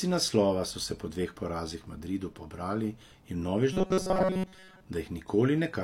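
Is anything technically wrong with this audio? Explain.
Yes. From 3.73 to 4.84 s there is robotic sound from repeated short buffers. The likely cause is new audio arriving too seldom, so the playback side loops the same brief slice, about 5.3 ms long, over and over while most of the real audio in that stretch is skipped. That looping stamps a fixed 188 Hz pitch onto the speech, turning it into a rigid, metallic buzz that only loosely tracks the talking underneath.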